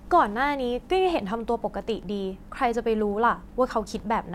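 No technical faults can be heard in the speech. There is no moment in the recording that calls for a time or a description.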